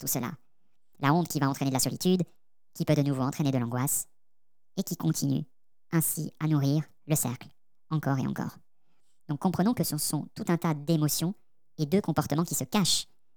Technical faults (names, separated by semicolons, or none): wrong sample rate